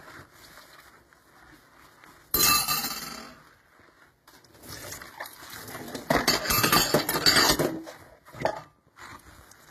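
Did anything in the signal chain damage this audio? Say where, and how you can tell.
Yes, and it sits at the codec stage for the whole clip. Nothing comes through above about 14.9 kHz, and the sounds carry two different kinds of compression artefacts heard together. That mix points to transcoding between lossy codecs, likely something like low-rate Vorbis re-encoded to HE-AAC, where the second encoder wastes bits on the first one's artefacts and adds its own.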